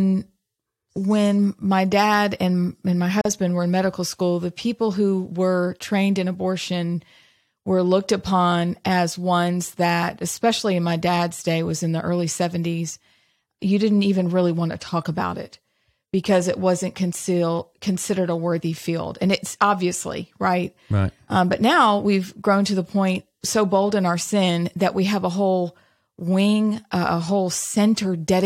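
At 3.21 s, right after "dad and and my" and before "were in medical school", the speech drops out for about 40 ms: a gap at a join of encoded pieces. The audio was encoded in separate parts and joined untrimmed, so encoder start-up delay and last-frame padding remain as silence. It sounds like a brief hiccup before the speech resumes where it stopped. The waveform shows a flat stretch with smeared edges, and the spectrogram shows a narrow empty vertical band.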